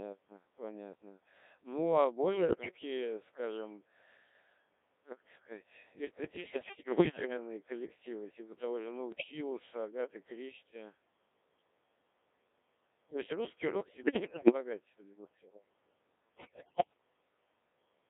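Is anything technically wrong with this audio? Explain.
Yes, two related problems. The whole speech clip runs through a Codec 2 vocoder at 1.3 kbit/s, which fits a narrow line band of roughly 250 Hz to 3.7 kHz. At that rate the decoder only gets pitch, voicing, energy and a rough spectral envelope, and it rebuilds the voice from sine waves, so the original waveform is gone. The damage is heavy: a robotic, buzzy voice with a thin, boxy tone throughout.

On top of that there are bursts of bit errors on digital voice radio at 2.33–2.69 s, 6.36–7.37 s (right after "как это сказать", before "коллективы типа того же"), 9.12–9.31 s (after "коллективы типа того же"), 13.88–14.53 s (after "есть русский рок", before "судя по всему") and 16.37–16.93 s. Somewhere between about 7 and 15 percent of bits get flipped, and each bit steers a whole frame's pitch, level or spectrum. So the voice suddenly lurches in pitch and loudness and breaks into warbles, bleeps and garbled robotic gibberish.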